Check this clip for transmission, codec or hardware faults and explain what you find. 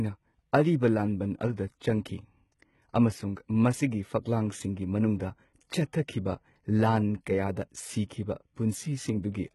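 Two problems turn up in this speech clip: heavy codec damage throughout and one short pre-echo.

Throughout, the sound stops dead at 11.8 kHz and the treble above the crossover sounds synthetic and gritty, with lispy s sounds. That's likely HE-AAC compression rebuilding highs from copied lower bands, and the heavy damage fits a very low bitrate, around 16 kbps.

From 1.79 to 1.81 s there's pre-echo: a short hiss smeared about 21 ms ahead of an attack, because block-wide quantisation noise leaks into the quiet moment before it.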